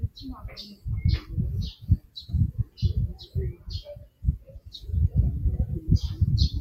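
A noise suppressor tuned for speech is active on these non-speech sounds, treating steady and decaying material as noise and swinging the level by roughly 15 dB so it pumps and thins. The suppressor cuts the sound at 1.76–2.31 s, 2.59–2.79 s, 3.14–3.35 s, 3.53–3.68 s and 3.95–4.81 s, with drops of about 13 to 15 dB that pull sustained parts down.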